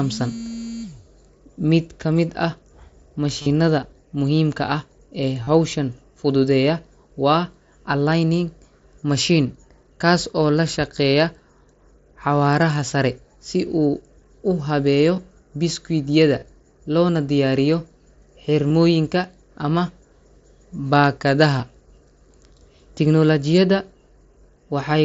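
Concealed Bluetooth headset packet loss occurs at 3.42–3.46, 5.43–5.48, 15.16, 16.39–16.42, 18.69 and 21.58 s, with gaps of 15 to 45 ms. The receiver refilled each gap by repeating a recent waveform stretch. The longer runs sound buzzy and even. On a spectrogram they appear as flat, periodic striping, and in the waveform as repeated cycles at steady level.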